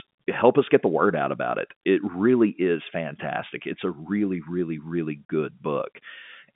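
No faults heard; the speech sits in the normal G.711 telephone band, roughly 150 Hz to 3.5 kHz with nothing above 3.8 kHz, as expected for a 64 kbps mu-law line.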